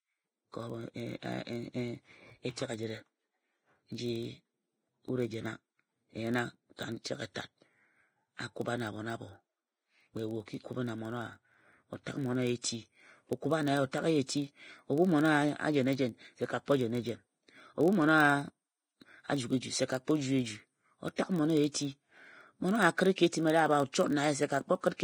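Throughout the speech, the upper band is hissy and grainy, with rough vowel tones. This is likely heavy Vorbis compression at a low rate of around 30 kbps. The treble is quantised into noise rather than merely dulled, which is what separates it from a plain low-pass filter.

A steady 43.1 Hz buzz also runs the whole length and rises and falls with the speech level. That points to a filter restarted on every block, each of about 1024 samples, with a tiny transient at every block start. Mains hum would hold a fixed level instead.

Pre-echo appears at 12.61, 14.26, 21.16 and 23.16 s. In each case a short hiss of 22 to 24 ms smears in just before a sharp onset, as coding noise spreads back through the block. Unlike a click, it arrives ahead of the attack and softens it.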